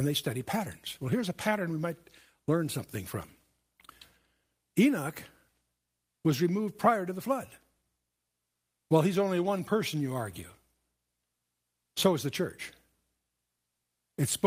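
Nothing in the speech stood out as a technical problem on listening.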